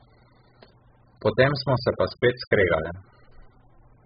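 From start to finish the speech is dull and muffled, with nothing above 5 kHz, and the sibilants and vowels carry a smeared, warbling, fizzy texture. This points to heavy AAC compression, likely AAC-LC at a very low bitrate around 8 kbps, where the encoder drops the top band and quantises the remaining frequency lines coarsely. On a spectrogram the energy stops at a hard ceiling near 5 kHz, with patchy holes and blocky smearing below it.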